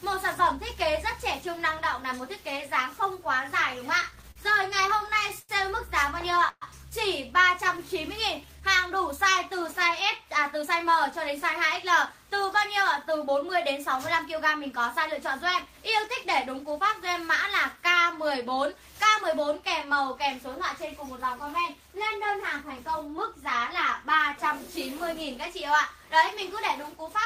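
From 4.01 to 5.51 s, repeated stalls (stutter) interrupt the sound eleven times, the longest for 95 ms. Unlike a single freeze, these are many short holds that drag the passage without losing anything.

At 6.49 s a call audio freeze holds the last sound for 128 ms, fading to 30 ms of silence before resuming intact, likely from packets held up in transit.

From 7.85 to 8.78 s, a jitter buffer slow-down stretches the sound to 92% speed by adding 88 ms. Pitch stays put, so it drawls rather than sounding like slowed tape.

From 10.55 to 16.81 s, a jitter buffer speed-up runs the sound at 104%, trimming roughly a third of a second. It runs at unchanged pitch, not chipmunk-like.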